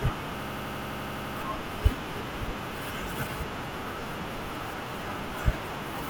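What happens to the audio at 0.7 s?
At 0.7 s you're inside a system hang loop from 0.43 to 1.37 s: the hardware keeps replaying one 85 ms chunk, likely a 4096-sample buffer, giving a machine-gun stutter at 11.7 Hz.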